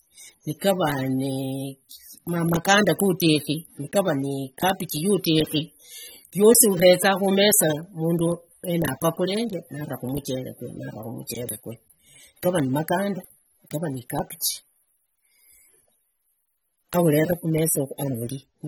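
Throughout the speech, the likely culprit is AAC compression at a low bitrate. The encoder quantises each frame's frequency lines coarsely against a hearing model, leaving plainly audible codec damage that fits AAC-LC at around 27 kbps, with nothing above 19.3 kHz.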